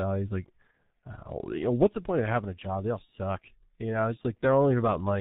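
Throughout, the speech carries heavy G.723.1 codec damage. Nothing above 4 kHz gets through, and the coarse, slowly updated voice model leaves the sound muffled and hoarse, with smeared consonants, which fits the 6.3 kbit/s mode. A simple band limit would only dull the sound. This also adds hoarseness and blurs the consonants.

At 0.71 to 0.79 s and again at 3.05 to 3.11 s, VoIP packet loss concealed by the speech codec shows up. Each gap sounds like one missing 30 ms frame. The decoder kept extending its last pitch and filter at falling gain, so the sound briefly turns into a stretched, fading buzzy tone or coloured noise, and it stays weak or distorted for tens of milliseconds afterwards. A plain dropout would leave silence or a click, not a sustained tone.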